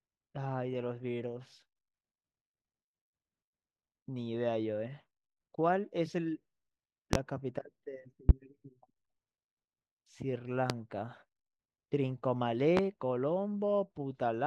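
Four loud pops break into the speech, at 7.13–7.17 s, 8.29–8.33 s, 10.70–10.74 s and 12.77–12.81 s. Each is a single sharp crack lasting under 40 ms, around 25 dB above the speech for the first three and about 20 dB for the last, with the speech running on beneath. They are likely voltage spikes from a switch, plug or static discharge. On a waveform each appears as a tall narrow spike, and on a spectrogram as a thin vertical stripe spanning the full frequency range.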